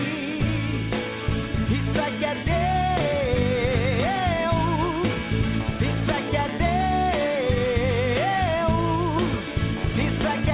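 No technical faults can be heard in this audio. It has passed through a working call path whose narrowband codec, consistent with G.711 mu-law at 64 kbps, leaves nothing above 4 kHz, giving it the band-limited sound of a telephone line.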